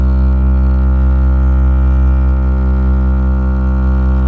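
Nothing goes wrong in this bit of music as it comes down the call line; the top end simply tops out around 8 kHz, which fits a wideband call codec such as G.722 at 64 kbps doing its ordinary job.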